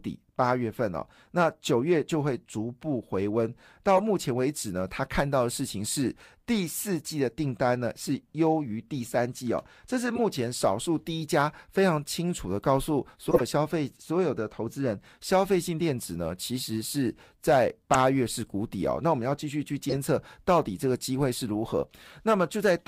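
Speech, and it has five short bursts where a corrupt frame was decoded: 3.97–4.00 s, 10.15–10.20 s, 13.31–13.41 s, around 17.94 s, and 19.89–19.97 s. Each is a brief chirpy, noisy blip that sounds like a handful of damaged frames played anyway, with energy landing at the wrong frequencies. The first two peak at about -20 dBFS, and the last three are louder, at about -10 dBFS.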